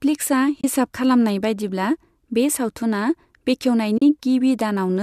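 At 0.61 to 0.64 s, just before "खलामनाय बायदिब्ला बे", and again at 3.98 to 4.02 s, the speech drops into brief silences of 30 ms and 40 ms. This is AAC frame loss with muting. The decoder zeroed the missing frames, and the overlapping windows fade the sound out and back in, so there is a soft-edged hole. The gap lengths fit three and four frames of about 10 ms, matching the light coding of what is likely low-delay AAC at around 64 kbps. On a spectrogram each loss appears as a narrow full-band blank column with tapered edges, and the waveform tapers smoothly to silence and back.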